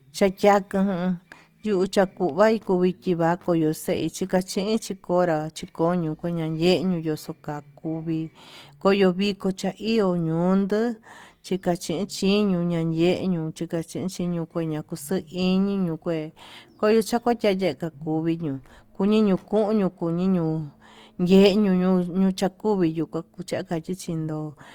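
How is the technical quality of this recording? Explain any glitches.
The speech is degraded by one steady fault. Opus compression, throughout: the graininess likely comes from Opus music mode at a rate that fits around 24 kbps, filling starved bands with noise. Content still reaches about 20.2 kHz, yet tones sound plainly rough and grainy.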